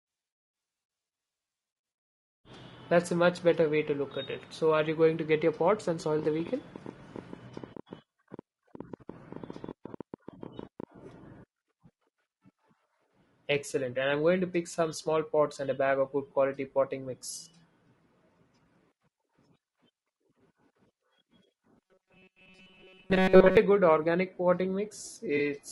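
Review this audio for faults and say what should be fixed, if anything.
The speech has low-delay AAC compression throughout. It sounds rough and grainy. Noise sits between the harmonics, and the top band sounds synthetic. This likely comes from AAC-ELD at a low bitrate, which fits about 32 kbps. Short frames resolve pitch poorly. Raise the bitrate or use a longer-frame codec.

A train of clicks runs from 6.19 to 10.84 s. There are about nine per second, spaced unevenly, around forty in all. They peak a few dB above the speech and tick through the pauses too. Likely cause: interference or a struggling interface. Shield cables and check the interface.

Robotic sound from repeated short buffers appears from 21.86 to 23.57 s. A rigid, metallic buzz at 188 Hz replaces most of the audio. It likely comes from the last buffer being replayed while new audio arrives late, which fits a buffer of about 5 ms. 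Enlarge buffers or fix the audio thread's scheduling.

AAC frame loss with concealment occurs from 25.37 to 25.40 s. About 20 ms of audio is missing, which fits a single lost frame. The decoder rebuilt it from the previous spectrum, leaving a brief smeared, noisy patch. Protect the stream with retransmission or forward error correction.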